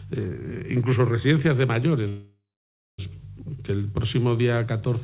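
There's channel delay (comb filtering) all the way through: one channel lags the other by a few samples, a tenth of a millisecond or so, and the mono sum cancels around 5 kHz upward, leaving a hollow, phasey edge. From 2.08 to 3.00 s there's a call audio freeze, likely from packets held up on the way so the jitter buffer ran empty. The last sound smears into a fading buzz or hiss, then about 0.58 s of silence, before the audio picks up where it stopped. Nothing gets lost, and the whole thing runs about 0.9 s late after that. The call codec's band stops at 4 kHz, which you can hear as the usual narrowband ceiling.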